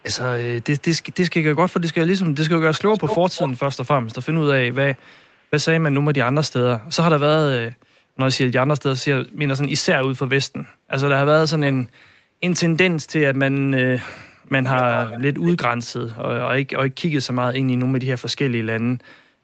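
A delayed copy of the speech trails it by about 0.2 s at 0.61–1.15, 2.74–3.59, 4.96–5.45, 8.99–9.04 and 14.74–15.24 s, barely audible at first and near speech level at 2.74 and 14.74 s. This echo leak likely comes from a loudspeaker echo canceller letting microphone pickup through.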